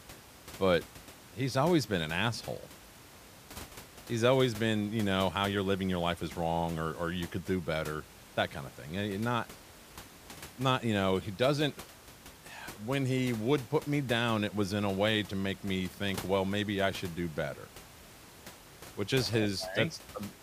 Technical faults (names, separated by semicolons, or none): none